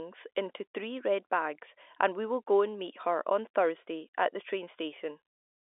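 No technical faults are audible.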